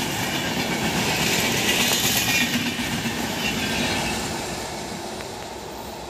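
At 1.92 s a single loud pop jumps well above the sound, and from 5.21 to 5.45 s two more follow in quick succession. Each is likely a voltage spike from a plug, switch or static. Unlike a dropout, the sound carries on underneath.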